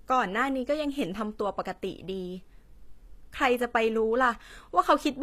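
Speech, with HE-AAC compression damage audible throughout. The upper spectrum ends abruptly at about 14.9 kHz, and the treble below that edge sounds synthetic, as if copied up from lower bands and loosely shaped rather than carried from the original. That points to spectral band replication, so the clip was likely encoded with HE-AAC at a low bitrate, consistent with roughly 24 kbps. Sibilants come out gritty and metallic.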